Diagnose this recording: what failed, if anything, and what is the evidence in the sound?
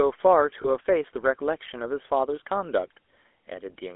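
The codec stage is at fault. Throughout the speech there is the buzzy, gravelly roughness of the GSM full-rate codec, at a rate that fits 13 kbps, and the audio is confined to a telephone band of 300 Hz to 3.5 kHz. On a spectrogram, nothing sits above 3.5 kHz or below 300 Hz, and the harmonics look grainy and smeared. The codec models the vocal tract and drives that model with regularly spaced pulses, keeping only every third excitation sample, so fine detail is lost.

Lost GSM frames on the transmission path (network or radio link) cause a brief metallic ring from 0.62 to 0.67 s. The gap fits a single lost 20 ms frame. The decoder had no good data for that frame, so it reused the parameters of the last good frame, holding the sound briefly. On a spectrogram the harmonics freeze into a short, static patch. In the waveform, near-identical cycles repeat before normal decoding resumes.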